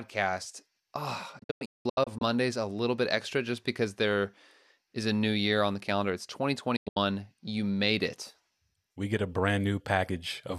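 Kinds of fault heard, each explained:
digital broadcast dropout: the receiver lost valid frames and muted until clean ones returned. The speech drops out in short holes, 480 ms lost across 1.39 to 2.22 s before "a little bit extra", then 168 ms around 6.76 to 6.97 s.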